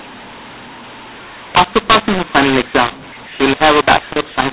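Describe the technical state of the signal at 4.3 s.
At 4.3 s, as throughout, mu-law and A-law are mixed up: A-law bytes are decoded as mu-law, scrambling levels into harsh, distorted speech. The waveform shows jagged, uneven amplitudes, and the spectrogram shows noise filling the pauses.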